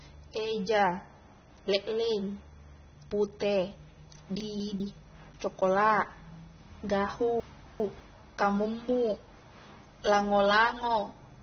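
From the start, the speech sounds dull and smeared, with a fizzy, warbling edge on sibilants and sustained sounds. This is likely AAC compression at a low rate, roughly what a 24 kbps AAC-LC encode would produce. A spectrogram shows a hard ceiling at about 6.3 kHz with nothing above it. Below that ceiling there are patchy holes and blotchy, noise-like fills where the encoder has discarded detail.

From 4.4 to 4.8 s the chunks play out of order. A 200 ms segment arrives one slot late, after the segment that should follow it. The result is a brief jumbled stumble across the hard joins. From 7.4 to 8.0 s the same fault recurs, with a 200 ms segment displaced two slots, which causes a longer garble. On the waveform, the joins appear as abrupt discontinuities and envelope jumps. On a spectrogram, they show as vertical lines and misaligned harmonic contours.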